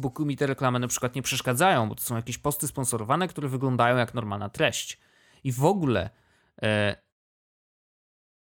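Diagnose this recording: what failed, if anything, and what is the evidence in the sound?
Nothing in the signal chain has failed: the speech is intact, and the only change is a deliberate smooth fade-out that begins at about 7 s and reaches silence by 7.14 s without any click or hard edge.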